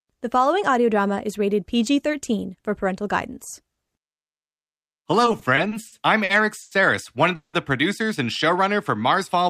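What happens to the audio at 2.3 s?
Nothing goes wrong at 2.3 s; the speech there is intact, with no dropout, click or distortion.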